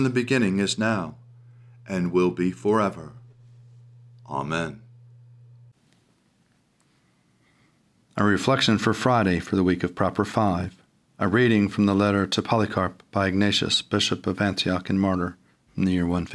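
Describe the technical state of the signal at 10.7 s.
At 10.7 s the speech signal is intact, with no dropout, distortion, glitch or other audible fault at that moment.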